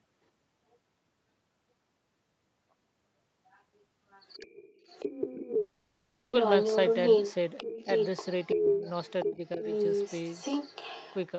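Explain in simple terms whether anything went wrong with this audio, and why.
From 4.26 s to the end, a second voice runs underneath the main speech, roughly as loud as it. This is the other side's voice leaking through, likely because the echo canceller failed to strip the loudspeaker sound from the microphone.

Between 5.61 and 6.35 s there is a long network dropout, likely caused by audio not arriving. The missing stretch is filled with a smeared, buzzy continuation of the last sound rather than silence. Speech then resumes further on, with that part gone, unlike a brief click or skip.

At 8.55 to 8.86 s and 9.25 to 9.64 s, the main speech drops noticeably in level while the leaked voice plays. This is speech suppressed in double talk, likely the echo canceller turning everything down when both sides overlapped. Unlike the dropout, the sound dips rather than being replaced.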